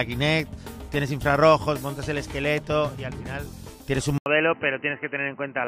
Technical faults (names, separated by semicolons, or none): input switched to a poorer device